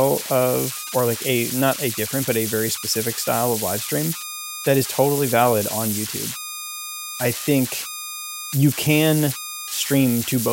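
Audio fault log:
throughout, converter idle tones: undithered delta-sigma conversion locks into repeating bit patterns, leaving a whistle around 1.5 kHz at about -7 dB relative to the speech.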